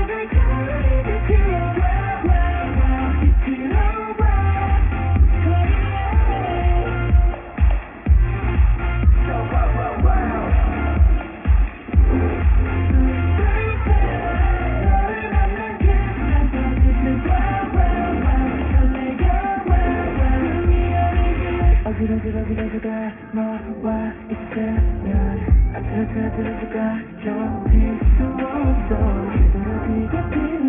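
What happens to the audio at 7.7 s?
At 7.7 s, as everywhere else in the clip, the sound suffers from aliasing. The sample rate was cut from 44.1 kHz without first removing content above half the new rate. The band ends abruptly at 3 kHz, which points to a new rate of about 6 kHz. Everything that stood above 3 kHz is mirrored back down below it as unrelated, wrong frequencies, roughly 20 dB under the wanted signal. That folded energy gives high-frequency detail a gritty, metallic edge, and the spectrum stays full right up to the 3 kHz cut-off.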